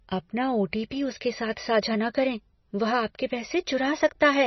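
Throughout this speech the sound is watery and swirly with nothing above 5.9 kHz, likely from heavy MP3 compression at a low bitrate, around 24 kbps.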